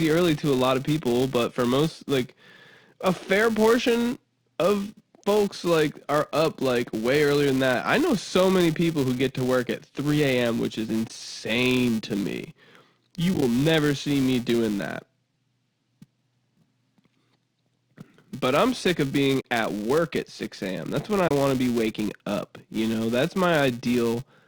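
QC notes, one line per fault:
Throughout: filter restarted on every block. A steady buzz near 345 Hz sits under the speech and follows its loudness. The filter starts each block from silence, so every block opens with a small transient. That rate fits a 128-sample block.
11.08-11.10 s, 13.34-13.42 s, 19.41-19.45 s, 21.28-21.31 s: AAC frame loss with muting. Each is a soft-edged dropout of 20 to 40 ms. Lost frames decode as silence, and overlapping windows fade the sound out and in. At 13.3 s, short gaps of around 10 ms scatter over 80 ms.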